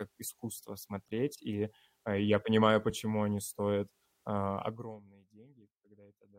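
A short speech recording with no technical faults to report. The level rises and falls smoothly in places, as a fader would move it.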